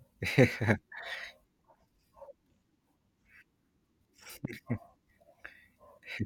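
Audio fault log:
4.45–4.47 s, loud pop: a sudden voltage step or pulse, likely from a plug, switch, static discharge or driver glitch, enters the signal path once. It lands as a single sharp pop, peaking about 10 dB above the speech, which continues underneath.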